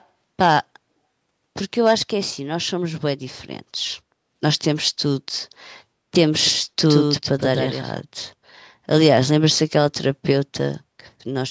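Right at the start, 0.0 to 0.06 s, there's a very faint echo leak, a copy trailing the speech by 168 ms, likely the far end's echo canceller missing some loudspeaker pickup. From 6.46 to 8.00 s there's a doubled audio track: a full-band copy roughly a tenth of a second behind and only a bit quieter, with no room tail, cutting in and out abruptly, likely from a second, slower capture path.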